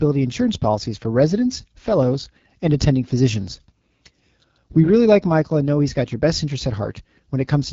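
Throughout the speech, an AMR wideband (HD Voice) codec at one of its lowest rates, which fits 8.85 kbit/s, models the voice with sparse pulses up to 6.4 kHz and fills above with shaped noise, leaving plainly audible rough, raspy speech and nothing above 7.6 kHz.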